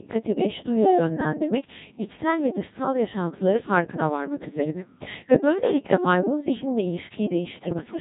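Codec 2 vocoder coding runs through the whole speech clip, and the damage is heavy. Only pitch, voicing, energy and a spectral outline survive, and sine-wave synthesis rebuilds the voice, so it sounds robotic and buzzy, consistent with the 1.6 kbit/s mode. Bit errors on digital voice radio hit from 7.56 to 7.84 s, with roughly one bit in twenty flipped. Corrupted frame parameters make the synthetic voice lurch in pitch, level and timbre, warbling into gibberish across what sounds like about six frames.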